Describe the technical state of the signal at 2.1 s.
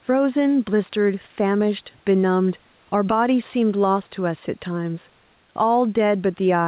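At 2.1 s the signal shows gain pumping, which is present across the whole clip rather than at that moment alone. The level swings by around 5 dB, with the room noise about 41 dB below the speech, and the dynamics are squashed. The likely cause is microphone gain set far too high, with a fast limiter or compressor pulling it back on every peak. Nothing is heard above 4 kHz, which fits a G.711 mu-law call path at 64 kbps.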